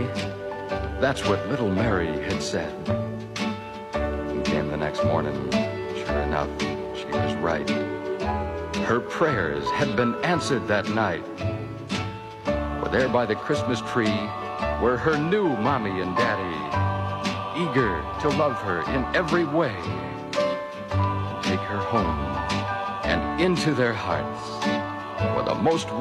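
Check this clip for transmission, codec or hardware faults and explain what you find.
One codec fault. From 19.00 to 19.05 s, compressed frames are skipped. A couple of frames, roughly a tenth of a second, never play. The audio jumps ahead at the join.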